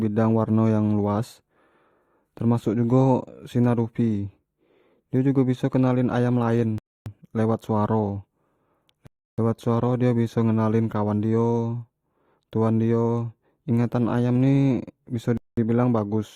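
The player's buffer ran dry three times, causing a rebuffering stall at 6.78 s (0.28 s), 9.07 s (0.31 s) and 15.37 s (0.20 s). Each time the speech cuts to silence, then picks up exactly where it stopped, adding time without losing any audio.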